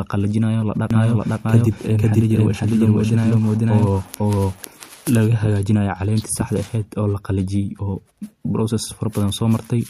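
From 0.9 s to 5.2 s the speech carries a doubled audio track: a second copy of the same speech runs about half a second behind, at roughly the same loudness. It is likely a second capture through a slower path or two misaligned copies in an edit. Unlike an echo or room reverb, the trailing copy is full-band, never decays or takes on room colour, and cuts in and out abruptly at both ends.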